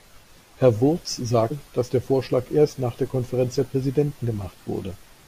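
At 1.47 to 1.52 s, just before "dass der", damaged data in the compressed stream makes the decoder misread frames and lose sync, producing a short chirp or blip. On a spectrogram it shows as a brief broadband smear; the waveform shows a jagged, discontinuous burst.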